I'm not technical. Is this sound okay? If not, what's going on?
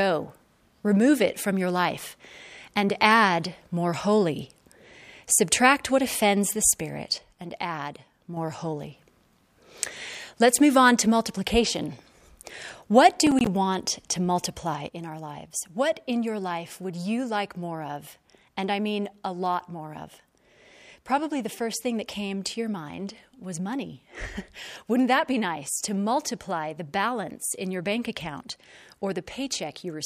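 No, it has two problems. From 7.18 to 8.37 s, and again from 14.88 s to the end, the speech suddenly gets noticeably quieter, as if half the sound vanished. That's most likely one channel dropping out: one side of the stereo recording went silent, leaving only the other.

Between 13.27 and 13.47 s there's a short burst of crackle. That's processor overload crackle: the computer got too busy to keep up, and about seven tiny chunks of sound, each roughly a hundredth of a second, came out as silence, giving a gritty, broken texture.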